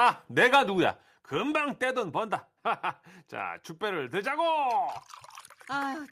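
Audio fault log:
1.02 s, microphone volume stepped down: speech and background drop together by about 6 dB and stay lower, likely because the call software cut the device's input volume in one step. The waveform envelope narrows abruptly, and the spectrogram dims evenly across all frequencies.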